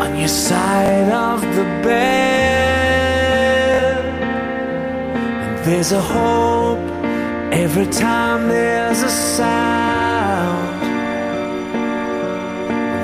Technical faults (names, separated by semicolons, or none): repeated buffer